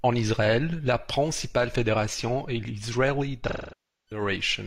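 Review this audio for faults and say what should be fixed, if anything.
There's AAC frame loss with concealment from 3.47 to 4.21 s. About 0.6 s of speech went missing, which fits around 14 lost frames. The decoder fills the gap from the last good spectrum, so the sound smears, decays toward silence, then fades back in. Adding FEC or a bigger jitter buffer on the transport would help prevent it.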